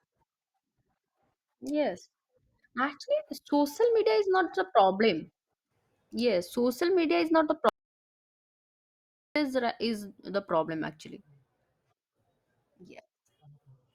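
At 7.69 s the speech cuts out abruptly into an audio dropout to silence lasting about 1.67 s, resuming mid-flow at 9.36 s. The input was likely lost while recording continued, writing silence: the waveform goes flat and the spectrogram shows a blank gap with no room tone.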